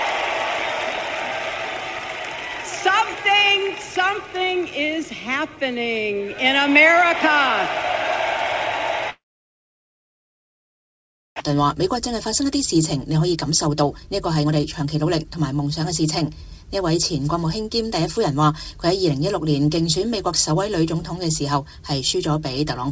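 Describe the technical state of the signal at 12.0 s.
At 12.0 s you're inside a jitter buffer speed-up running from 11.50 to 18.01 s: the receiver keeps trimming short pitch-period slices to drain excess buffered audio, so the sound plays about 10% fast at unchanged pitch, shedding around 0.7 s overall and feeling a bit hurried.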